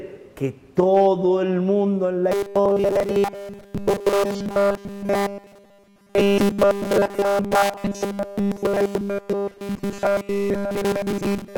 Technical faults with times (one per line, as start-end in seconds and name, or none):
2.32-11.57 robotic sound from repeated short buffers